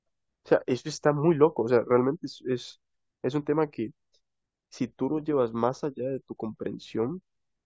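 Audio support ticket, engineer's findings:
No audible faults found in this speech recording.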